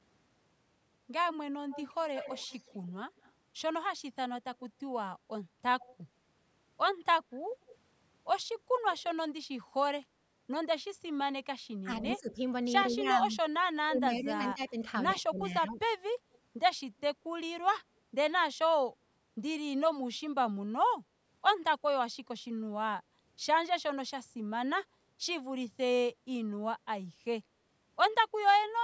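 From 1.69 to 3.32 s a faint delayed copy of the speech trails the original by 117 ms, sitting roughly 15 dB below it. This is echo leak, likely from a far end on loudspeaker whose echo canceller let part of the returning signal through. Shorter, weaker scraps of the same 117 ms echo recur at 5.81–5.96 s and 7.68–7.72 s, about 25 dB down. What separates it from reverberation is that it is a single discrete repeat at a fixed lag, not a smooth decay.

Between 11.84 and 15.8 s the talker's level repeatedly sags, by as much as about 15 dB, across roughly two seconds in total. This is speech suppressed in double talk: both sides were speaking, and the echo canceller likely could not tell the local voice from loudspeaker echo, so it attenuated both. Unlike echo leak, nothing extra is added here. The wanted speech itself loses level in chunks.

A last faint echo fragment, about 35 dB down, follows at 16.33–16.37 s.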